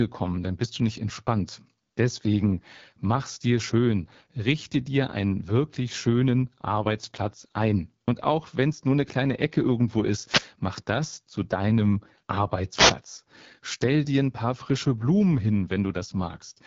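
From start to end, the speech carries the sound of the AMR wideband (HD Voice) codec. The roughness points to one of its two lowest modes, which fits about 8.85 kbit/s. Speech is rebuilt from a vocal tract model driven by pulses. At this rate there are too few bits to do that cleanly. Voices turn rough and raspy, and the damage is plainly audible. Nothing is present above 7.3 kHz. The top band is filled with shaped noise, not real detail.

At 10.23 to 10.49 s, a wireless microphone noise hit cuts in. The radio link from an analogue FM microphone has faded. Reflected signals cancel the direct one, and receiver noise rises. It sounds like a short swish of static over the speech. A second hit follows at 12.74 to 12.95 s. It has the same cause and the same brief burst of static.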